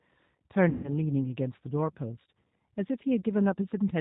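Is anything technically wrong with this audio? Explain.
Yes, there are two faults. Throughout the clip the speech has passed through a G.729 codec, which models the voice as a vocal tract filter driven by a pitch predictor and a few pulses per frame, discarding everything above 4 kHz. The result is muffled, slightly rough, synthetic-sounding speech whose plainly audible damage fits an 8 kbit/s G.729A stream.

From 0.69 to 0.94 s there is VoIP packet loss concealed by the speech codec. About 150 ms of audio went missing, and the decoder filled the gap by repeating its last pitch and filter at falling gain. That gives a stretched, fading sound, and the voice stays weak as it recovers.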